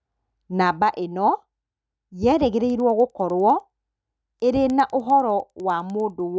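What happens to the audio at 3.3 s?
At 3.3 s the resampler is restarted on every block, from 2.7 s to the end. Each 100 ms block is converted without its neighbours. Its edges tick at 10 Hz.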